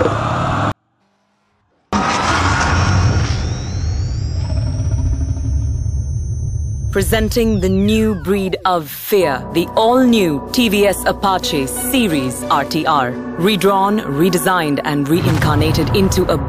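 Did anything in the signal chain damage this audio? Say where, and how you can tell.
Yes, at the sample-format conversion stage. From 0.72 s to 1.93 s the sound stays clean but falls about 48 dB at once, nearly inaudible. That is a 24-bit alignment error (too quiet). Samples held in the low 24 bits were read as 32-bit integers, shrinking them.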